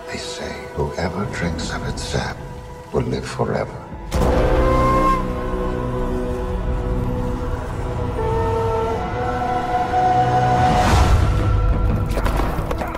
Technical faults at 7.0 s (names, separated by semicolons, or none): dropped samples